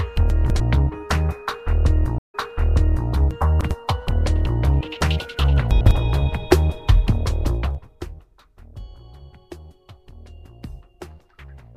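A brief garbled stumble at 0.3 to 0.6 s is chunks out of order: a 100 ms chunk plays two chunks late, leaving hard joins.

From 2.18 to 3.09 s the sound cuts out for about 150 ms, then resumes roughly 0.76 s earlier, repeating what was just heard. This is a stream reconnect: the connection dropped and a fresh decoder picked up from a resent burst.

The same jumbled stumble returns at 3.31 to 3.71 s, with a 100 ms chunk arriving three chunks late, and again at 5.71 to 5.91 s, where one chunk is displaced by a single position.

Between 7.51 and 8.11 s a ticking, zipping texture rides on the sound as the level falls by roughly 25 dB. This is zipper noise: the gain moves in unsmoothed 2 dB steps at around 30 per second, and each step clicks.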